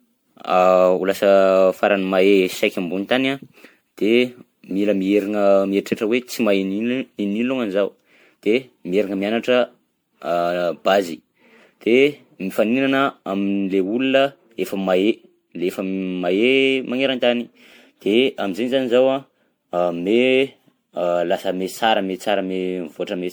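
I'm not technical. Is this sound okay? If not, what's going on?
No, not quite. The whole clip has what's called generation loss: the speech has a swirly, hollow quality, and the starts of sounds come out soft and smeared instead of crisp. That's likely because the recording was saved as an MP3, opened, and saved again about fifteen times over. Each save throws away a little more detail in a slightly different spot, and the damage piles up from start to finish.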